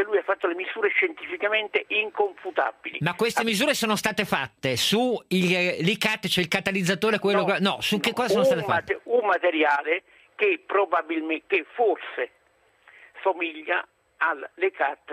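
No dropouts, distortion, timing errors or other technical faults are detectable anywhere in the recording.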